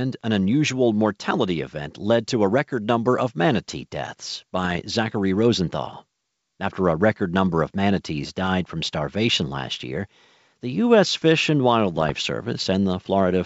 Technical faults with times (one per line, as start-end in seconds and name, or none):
4.57-4.82 bit errors on an ADPCM link
8.40-8.49 bit errors on an ADPCM link
11.94-12.12 bit errors on an ADPCM link